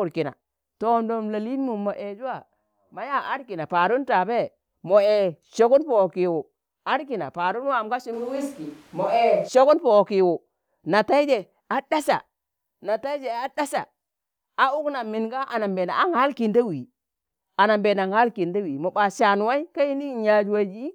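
At 8.15 s the speech suddenly turns roomy and hollow, thinner in the bass, then snaps back at 9.47 s. It's likely a switch to a distant microphone. The level barely changes, and room noise sits roughly 30 dB under the speech.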